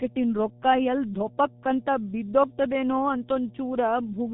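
Mains hum at 60 Hz runs through the whole of this speech recording, a steady low tone sitting roughly 15 dB below the talker. It points to a ground loop or nearby transformer leaking the power line into the signal chain. G.723.1 codec damage is also present from start to finish and is heavy. The speech sounds muffled and hoarse, with smeared consonants. The band runs from 150 Hz to 3.7 kHz, with nothing above 3.8 kHz, which fits a low-rate telephony coding at around 6 kbit/s.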